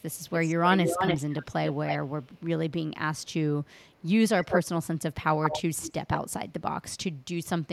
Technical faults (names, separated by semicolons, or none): echo leak